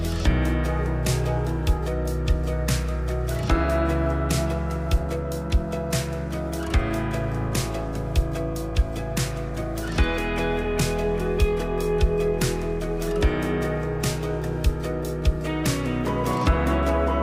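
No faults are audible anywhere in the recording.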